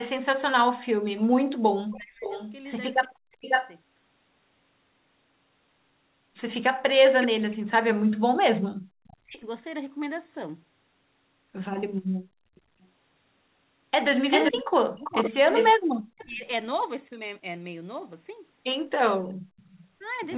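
Speech suppressed in double talk, 0.00 to 3.45 s: the speech dips hard, by around 40 dB at its deepest, for about two seconds in pieces. This is likely an echo canceller turning down both talkers at once.

Echo leak, 1.93 to 3.75 s: a delayed copy of the speech, trailing by 549 ms and nearly as loud, comes back. The likely cause is loudspeaker pickup that the far end's canceller failed to remove.

Speech suppressed in double talk, 7.18 to 9.41 s: the speech again drops by roughly 40 dB across about two seconds. The likely cause is the same overlap confusing the suppressor.

Echo leak, 9.04 to 9.17 s: a faint, brief echo scrap 549 ms behind, likely residue slipping past the canceller.

Echo leak, 14.30 to 16.26 s: a 389 ms delayed copy arrives at about the same level as the speech, likely uncancelled loudspeaker sound returning.

Speech suppressed in double talk, 14.51 to 16.47 s: the speech is chopped down by roughly 40 dB for around a second in total. 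This is likely suppression triggered by simultaneous talk.

Echo leak, 19.57 to 19.87 s: a faint trailing echo 389 ms late, likely another leak through the canceller.

Throughout, nothing is heard above 4 kHz, which fits a narrowband G.711 call path.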